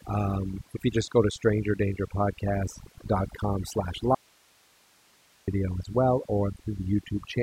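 From the first moment to the last, the background between phrases sinks to near silence dotted with twinkling, chirpy specks. That is overdone noise removal: a noise reduction stage set far too hard, cutting individual frequency bands down or out whenever they come close to its idea of the noise, so the quieter parts of the voice are stripped away along with the hiss.

At 4.15 s the speech cuts off abruptly, mid-flow rather than fading, and for about 1.33 s only a thin hiss remains, roughly 35 dB below the normal signal level, until the voice snaps back in at 5.48 s. This is an audio dropout to a faint residue. The wanted signal was likely lost somewhere upstream while the path after the break stayed live, passing on only its own hiss until the signal returned.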